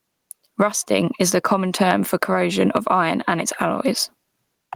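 Gain pumping runs throughout the clip: the gain swings by around 15 dB, and the speech sounds squashed and flat. The likely cause is input gain set far too high, with a fast limiter clamping down on every peak.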